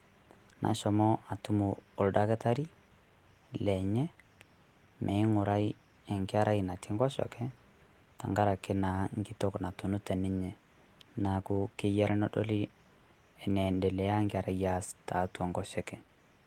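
No audible technical faults turn up anywhere in the recording.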